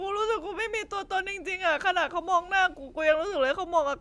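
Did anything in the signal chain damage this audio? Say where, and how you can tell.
No, nothing in the signal chain damaged this speech recording. At no point in the audio can any stage of the path be heard acting on the sound.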